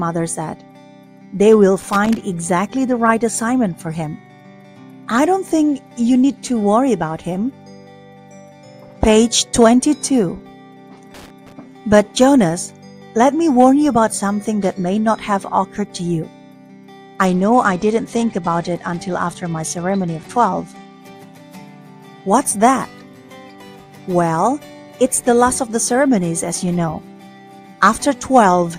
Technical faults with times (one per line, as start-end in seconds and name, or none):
1.80-2.17 loose connector crackle
11.14-11.52 loose connector crackle
17.26-20.94 Bluetooth SBC bit pool drop